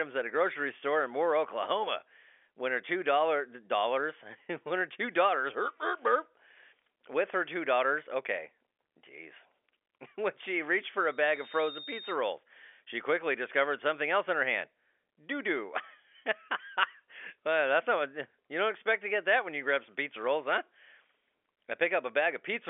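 From 10.96 s to 12.19 s, a loudspeaker feedback squeal rises out of the speech. A microphone is hearing its own loudspeaker, and the loop runs away at 3.7 kHz. The pure tone swells over roughly under a second, ending about 10 dB above the speech, over the narrow telephone band.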